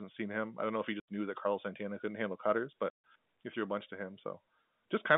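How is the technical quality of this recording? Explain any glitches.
Two dropouts break up this telephone-band speech, which runs from about 150 Hz to 3.6 kHz through G.711 A-law coding. Packet loss filled with silence occurs at 1.0 s (80 ms lost) and 2.9 s (140 ms lost). Missing packets, consistent with 20 ms packets, were replaced by silence, leaving hard-edged holes.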